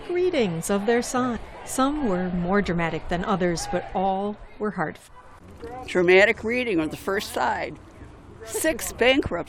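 Damaged data in a compressed stream causes brief glitches at 1.35–1.37 s and 5.06–5.09 s, as the decoder misreads corrupted frames and resyncs, leaving waveform discontinuities.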